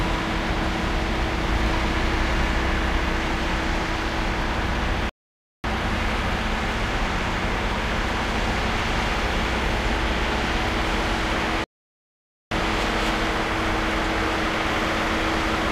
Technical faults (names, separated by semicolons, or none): rebuffering stall